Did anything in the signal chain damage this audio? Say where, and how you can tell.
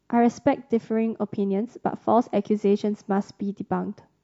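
No, nothing here sounds damaged.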